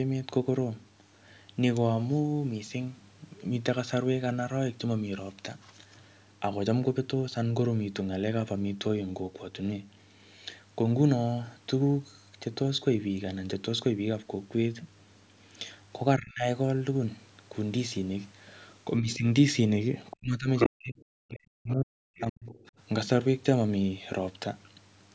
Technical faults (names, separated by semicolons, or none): speech suppressed in double talk; other side's voice leaking through